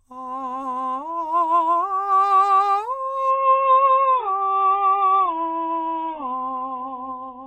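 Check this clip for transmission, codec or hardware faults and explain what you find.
One fault is audible in the music: a switch to a lower-quality stream partway through.

Adaptive stream at a lower bitrate, from 3.31 s to the end. The player drops to a much leaner encoding of the same music with no gap, the kind of switch made when a connection slows. The sound fits a fall from about 96 kbit/s AAC to something near 8 kbit/s. Nothing above 3.7 kHz survives, so the treble vanishes abruptly, leaving a dull, smeared sound with obvious codec artefacts.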